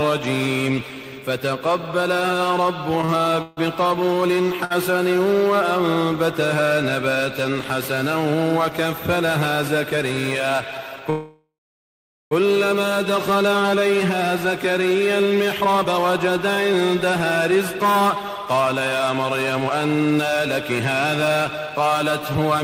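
Between 3.01 and 3.59 s, packets kept arriving late, so the jitter buffer ran dry four times. The result is repeated stalls (stutter): the receiver extended the last sound to fill about 209 ms in total, the longest gap 148 ms, so roughly a third of that stretch drags and stutters. At 4.65 to 4.72 s a single packet missed its slot, giving a short stall from a late packet: the sound is held for 56 ms with a slight buzz or dip before the audio resumes from the same point. From 11.10 to 12.33 s the audio stops moving forward for 1.21 s, first as a fading continuation of the last sound and then as about 800 ms of silence, before carrying on where it left off. This call audio freeze is likely caused by packets being held up in transit until the buffer emptied. From 15.61 s to the end, a jitter buffer speed-up trims the backlog: repeated removal of pitch-period-length slices, well under a second in all, runs the audio at 108% speed without changing pitch, so it sounds hurried.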